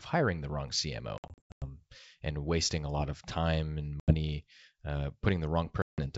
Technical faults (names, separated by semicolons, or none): packet loss on an ADPCM call